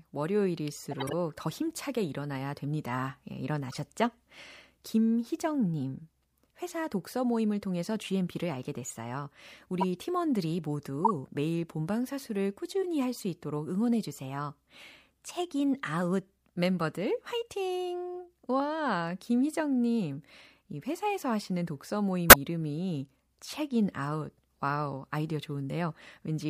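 A speech recording with six corrupt frame decoded events, at 0.91–1.13 s, 3.69–3.74 s, 9.81–9.84 s, 11.05–11.11 s, 12.82–12.85 s and 22.29–22.36 s. Damaged compressed frames were decoded regardless, so misread gains and codes push energy into wrong frequencies, heard as brief chirps and noise bursts lasting a few frames each. Levels vary: the 3.69 s blip is faint, while the 22.29 s burst is the strongest, with its error peaking around -5 dBFS.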